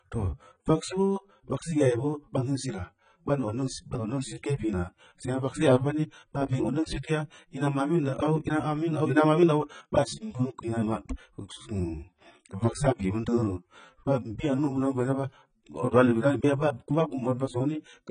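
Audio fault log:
Throughout: AAC compression, likely low-bitrate AAC-LC coding, which fits about 16 kbps. Nothing reaches above 9.6 kHz, so the speech sounds dull, and heavy quantisation of each frame's spectrum leaves holes and smearing that give sibilants a fizzy, warbling edge.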